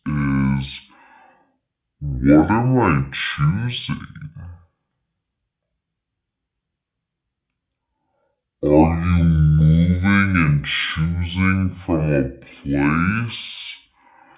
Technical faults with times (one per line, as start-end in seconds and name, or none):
0.00-14.37 wrong sample rate